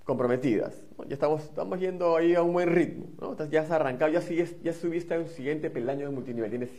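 At 4.07 s the sound drops abruptly, with no gap, into a lower-bitrate stretch of an adaptive stream that lasts to the end. The top end above about 14.9 kHz vanishes, which fits a switch to a low-rate HE-AAC rendition after the connection slowed.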